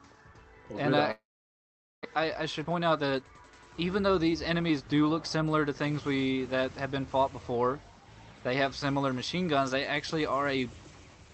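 A long network dropout, likely a stretch of packets that never reached the receiver, hits the audio from 1.11 to 2.07 s. The decoder extends the last sound as a buzzy, hissy tail that fades out, followed by about 0.8 s of silence. When the audio resumes, roughly 600 ms of material is missing, and the stream now carries about 0.3 s of extra delay. To recover that delay, a jitter buffer speed-up runs from 2.14 to 5.17 s. The receiver repeatedly removes short pitch-period-sized slices, around 0.3 s in total, so the audio plays at about 110% speed with its pitch unchanged and sounds noticeably hurried. The whole clip also carries the coding texture of an Opus call path, consistent with around 32 kbps, with high frequencies limited to about 8 kHz.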